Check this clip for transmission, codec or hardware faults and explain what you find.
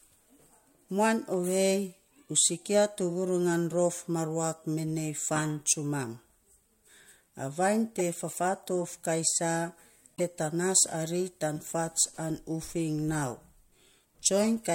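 One kind of fault turns up twice. Corrupt frame decoded, at 7.99 to 8.01 s and 10.17 to 10.21 s: damaged compressed frames were decoded anyway, scattering energy into wrong frequencies as brief chirps, squeaks, blips or noise bursts. The second burst runs longer, consistent with about two frames.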